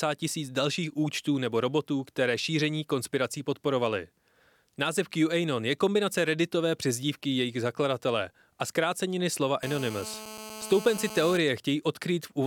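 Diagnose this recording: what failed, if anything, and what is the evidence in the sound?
A hard, raspy buzz cuts in at 9.63 s, right after "zakladatele a zkráceniny slova", and holds steady until 11.37 s, sitting about 13 dB below the speech. It is a GSM phone buzz at about 217 Hz with a dense stack of harmonics, unrelated to the speech. The fault is in the analogue wiring: a nearby 2G handset on a call transmitted in regular bursts, and the audio circuitry rectified those radio pulses into the signal path.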